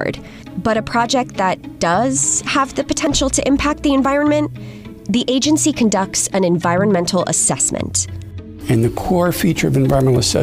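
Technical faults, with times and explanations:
3.07 s and 4.05 s: overlap between stream segments. At each point a short stretch of audio, about 8 ms at the first and 12 ms at the second, is missing. Adjacent 1-second segments carried time stamps that overlapped, so the player discarded the overlapping portion even though that sound was not actually duplicated. The waveform jumps across the gap, producing a brief click or tiny skip. The two events fall roughly one segment length apart, matching the segment boundaries.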